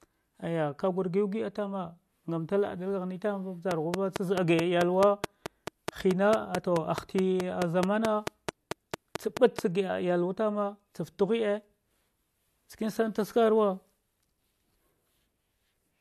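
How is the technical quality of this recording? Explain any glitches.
The recording has one clear fault: a train of clicks from 3.71 s to 9.60 s. About thirty sharp pulses of nearly identical shape arrive at a regular 4.6 per second, peaking well above the speech level, roughly 20 dB higher. This points to a repeating external pulse, likely electrical interference or a faulty connection, being added on top of the signal. It is heard as steady ticking that continues through the pauses as well as over the speech.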